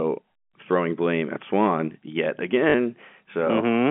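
At 2.70 s there's a quick robotic stutter lasting about 40 ms, through to 2.74 s. That's packet loss with the last packet repeated: the stream dropped out, and the receiver kept replaying the last chunk of speech it had until fresh audio came in. The 40 ms gap fits two lost 20 ms packets. The replayed chunks repeat at the packet rate, giving a brief 50 Hz buzz. The narrow G.711 telephone band is audible throughout.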